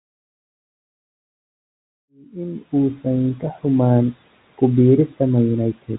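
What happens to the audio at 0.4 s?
Nothing goes wrong at 0.4 s; the audio there is intact, with no fault at that moment.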